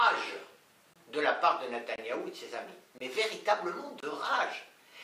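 Gap between chunks at 0.93 to 0.96, 1.96 to 1.98, 2.98 to 3.00 and 4.00 to 4.03 s: the audio arrives in 1-second chunks, and about 23 ms of silence sits at each join, likely left by codec padding or by a player starting each chunk late. Nothing is missing, but the sound breaks off briefly at every boundary, giving four short, evenly spaced holes roughly a second apart.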